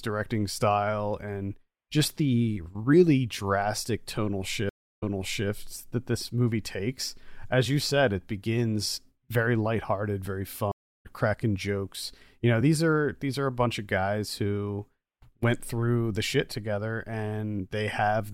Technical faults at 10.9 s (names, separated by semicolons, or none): stream reconnect